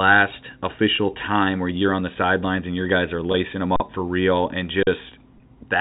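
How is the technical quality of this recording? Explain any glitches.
Telephone-band speech, carried in G.711 mu-law telephone coding so nothing above 4 kHz comes through, with five brief glitches of two kinds.

At 0.96, 3.32 and 5.38 s, a 20 ms moment sounds briefly held and buzzy. That is packet loss with pitch repetition: one lost packet each time, bridged by repeating the last pitch period.

From 3.76 to 3.80 s and 4.83 to 4.87 s, the sound stops dead for 40 ms with little click. That is an underrun with a held sample: the output buffer ran empty, the converter held its last value, and playback resumed where it stopped.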